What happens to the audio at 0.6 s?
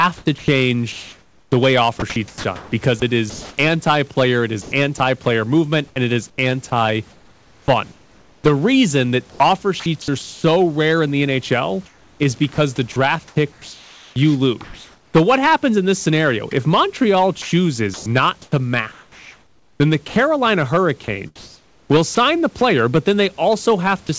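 At 0.6 s the speech falls inside a stretch from 0.18 to 3.58 s where it is sound chopped by the voice detector. Quiet parts drop out and are filled with soft synthetic hiss, about 1.5 s in all. This is likely a sender-side voice detector switching transmission on and off. Unlike a plain dropout, the gaps are never silent. Hard clipping runs through this moment as well. The signal is driven about 11 dB past full scale, so around one percent of samples have their peaks cut flat, giving crackle on loud syllables. That crackle follows the loudness of the speech.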